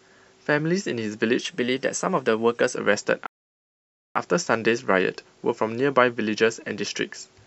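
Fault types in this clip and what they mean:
Drift correction step: from 1.39 to 2.75 s, speech runs about 6% fast and a semitone sharp, then snaps back, likely a clock-matching rate jump.
Rebuffering stall: at 3.26 s the sound drops to silence for 0.89 s while playback waits for data, then resumes exactly where it stopped.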